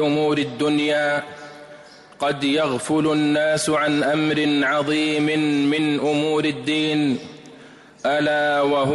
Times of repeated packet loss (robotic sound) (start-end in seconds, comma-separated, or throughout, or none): none